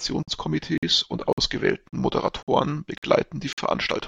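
At 0.23, 0.78, 1.33, 1.88, 2.43, 2.98 and 3.53 s the speech stops dead for 50 ms, a gap between chunks that recurs every 0.55 s: half a second of audio, then a hole. Each chunk plays out whole, but silence is inserted at every join, so the flow stutters with hard-edged dropouts. On a waveform these are flat silent stretches with abrupt edges; a spectrogram shows evenly spaced, full-height blank vertical bands.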